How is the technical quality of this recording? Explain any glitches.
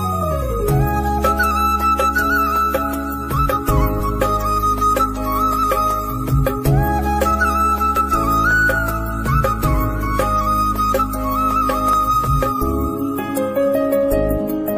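The recording has one recurring glitch, an overlap between stream segments at 4.0 s, 7.96–7.99 s and 11.93–11.96 s. Overlapping 4-second segment timestamps cause up to 28 ms to be trimmed, producing tiny skips. These show as waveform jumps and thin vertical spectrogram lines.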